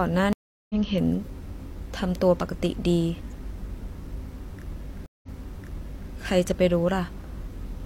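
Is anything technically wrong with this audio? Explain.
Yes, there are two stream reconnects. At 0.33 s the speech drops out for about 0.37 s and comes back roughly 0.4 s further on, so a piece is skipped. At 5.06 s a shorter gap of about 0.17 s is followed by speech that restarts 0.88 s earlier, repeating what was just heard. In both cases the connection broke, the player went silent, reconnected and started a fresh decoder mid-stream, landing at a different point in the audio.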